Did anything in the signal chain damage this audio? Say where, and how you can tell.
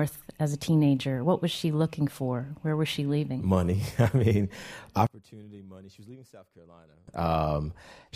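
Yes. One channel inverted, from 5.07 to 7.08 s: the speech suddenly drops by about 24 dB and turns faint, then returns to full level. Polarity is likely reversed on one leg of the stereo path, at the analogue wiring or a routing stage, so when the channels are summed to mono the centred speech and low end cancel. What is left is only the small difference between the two sides, heard as a faint copy.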